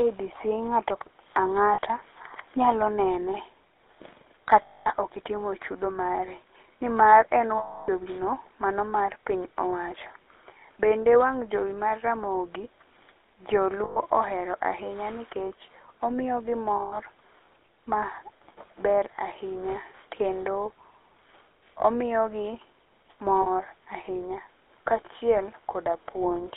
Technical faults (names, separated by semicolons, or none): GSM full-rate codec; lost GSM frames